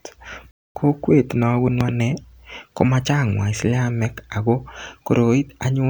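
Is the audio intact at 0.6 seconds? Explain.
No. A playback stall silences the speech from 0.51 to 0.75 s, about 0.24 s. It likely comes from the player running short of data. The speech resumes at "kokwet nabunu".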